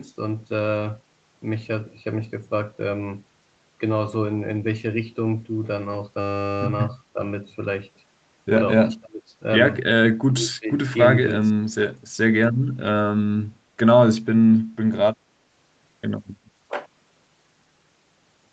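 Speech suppressed in double talk at 7.13–7.19, 8.81–9.32, 10.28–10.83, 11.56–11.95 and 13.43–13.50 s: the speech dips by about 10 to 30 dB, likely because an echo canceller mistook overlapping far-end talk for echo.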